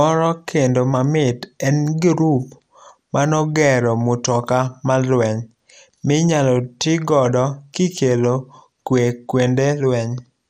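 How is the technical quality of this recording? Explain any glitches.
The recording is held back by one fault that runs through the whole speech clip: audible compression damage, likely from MP2 compression. The sound is dull, with a gurgling, granular edge on the speech. Layer II coding splits the signal into sub-bands and, when bits run short, drops upper bands and quantises the rest coarsely, which fits a rate around 80 kbps. A spectrogram shows nothing above 15.8 kHz, with patchy high bands switching on and off.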